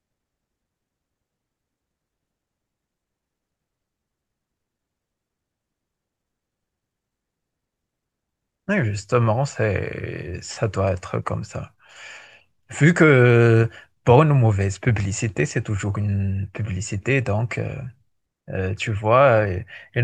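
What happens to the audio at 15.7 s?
Nothing goes wrong at 15.7 s; the speech carries on intact through that moment, with no dropout, click, glitch or other audible fault.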